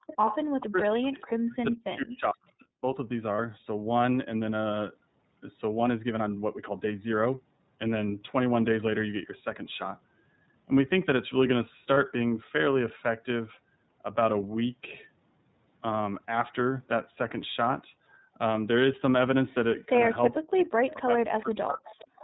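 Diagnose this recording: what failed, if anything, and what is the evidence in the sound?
iLBC codec, throughout the recording. At the codec stage the sound is confined to narrowband: nothing above 4 kHz survives. The speech has a plainly audible rough, slightly synthetic texture. That texture comes from each frame's excitation being coded on its own, and the behaviour fits the 13.33 kbps mode with 30 ms frames.

Background gated by the echo canceller, from 0.00 to 0.07 s. This is at the call-processing stage. For the opening 70 ms or so, the room sound falls away sharply, by about 39 dB, and then returns. The echo canceller, reacting to loudspeaker playback, clamped the microphone path hard. It released its hold almost immediately, so the ambient sound comes straight back.

Echo leak, at 0.07 to 0.67 s, 2.60 to 2.65 s, 20.34 to 20.94 s and 21.86 to 22.24 s. A delayed copy of the speech trails the original by 439 ms. 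It is about 10 dB below the speech in the first and third stretches, about 35 dB down at 2.60 s, and about 20 dB down at the end. This is likely residual echo at the call-processing stage: the canceller on a speakerphone side failed to subtract all of the loudspeaker pickup.

Speech suppressed in double talk, from 0.70 to 2.84 s and from 20.35 to 21.87 s. The talker's level dips by as much as about 40 dB over roughly 2 s and then roughly 1 s. Both stretches sit against the echo activity. This is likely echo-canceller suppression at the call-processing stage: with both sides active, it could not separate near speech from echo and attenuated both.

Lost iLBC frames, at 3.35 to 3.39 s and 11.94 to 11.97 s. Each gap is 30 ms long and is filled by a brief held, faintly buzzy vowel-like sound. This fault sits at the network stage. A single packet went missing each time, and the decoder concealed it by repeating the last pitch cycle blended with noise. 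Because iLBC frames are independent, the speech is clean again immediately after each gap.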